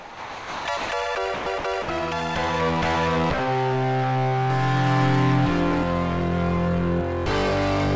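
The sound drops out and is replaced by steady low noise at 0.00–0.65 s, 0.77–0.89 s, 1.34–1.46 s, 1.58–1.64 s and 1.82–1.88 s, likely sound dropped by the voice detector, which mistook it for background and let comfort noise fill the gaps.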